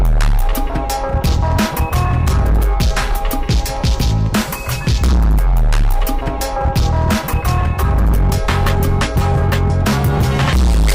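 Harsh fuzz rides on every loud passage from start to finish, with crackle on the peaks: hard clipping. The signal is driven about 14 dB past what a stage can pass, so nearly a third of the waveform has its tops sliced flat, adding high harmonics.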